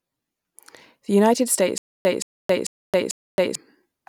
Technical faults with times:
1.78-3.55 stutter with silent gaps

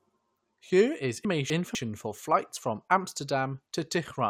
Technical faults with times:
1.25-1.75 chunks out of order

